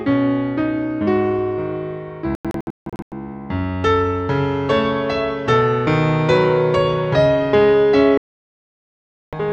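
From 2.35 to 3.12 s the sound breaks into several short silent holes, the longest 160 ms, totalling 512 ms; from 8.18 to 9.33 s it mutes solidly for 1.15 s. Both are digital broadcast dropouts: frames failed to arrive intact, so the receiver muted until good ones resumed.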